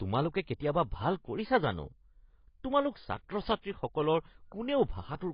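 From the first moment to the end, the speech sounds dull and smeared, with nothing above about 5.1 kHz and a warbly, fizzy edge on sibilants and held sounds. That's likely AAC compression pushed hard. The encoder throws away fine spectral detail to save bits, chopping the top off and leaving gaps it patches with rough approximations. The damage is heavy, which fits a very low bitrate, somewhere around 16 kbps with AAC-LC.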